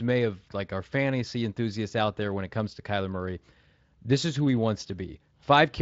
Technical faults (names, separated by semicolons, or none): none